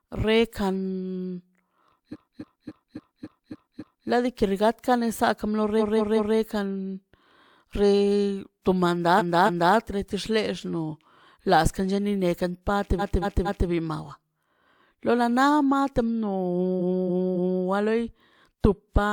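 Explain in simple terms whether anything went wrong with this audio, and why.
Repeated frames make the speech stutter at 2.12, 5.78, 9.17, 12.98 and 16.79 s. Each time, a short piece lasting 0.19 to 0.28 s plays again two to seven times. Stored chunks of compressed audio were played more than once, so the clip runs longer.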